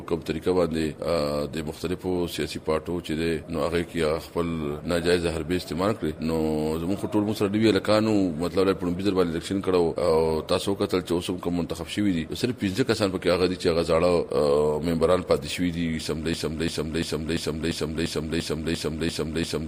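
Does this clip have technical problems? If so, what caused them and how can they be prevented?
Yes, there is a broken-record loop from 16.34 s to the end. A 0.34 s fragment repeats ten times, identical and back to back. Unlike an echo, which fades and overlaps new sound, nothing new arrives, which points to a likely stall in the player, encoder or stream that kept resending its last buffer. To prevent it, watch for stalled input and mute or drop the stream rather than replaying old data.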